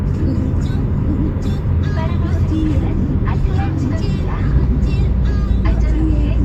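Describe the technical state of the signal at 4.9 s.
At 4.9 s the signal is intact, with no audible technical fault at that moment.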